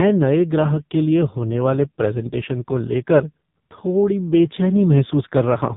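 From start to finish the speech carries heavy AMR narrowband mobile codec damage. Nothing above 3.8 kHz survives, so it sounds boxed in and thin. The pulse-driven vocal tract model is badly starved, which fits a 5.15 kbps mode. Voices turn buzzy and synthetic.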